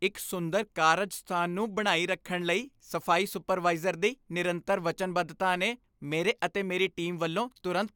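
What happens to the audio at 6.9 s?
Nothing goes wrong at 6.9 s; the speech carries on intact through that moment.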